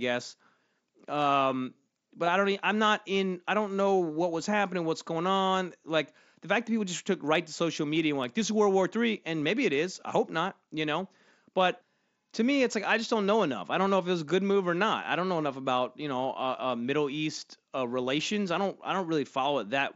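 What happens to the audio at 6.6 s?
Nothing goes wrong at 6.6 s: the speech carries straight through that moment without a dropout, glitch or other fault, heard through the wideband Bluetooth mSBC headset codec.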